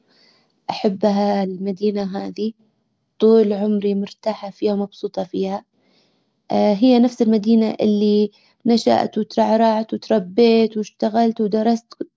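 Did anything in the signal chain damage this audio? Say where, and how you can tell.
No, nothing in the signal chain damaged this recording.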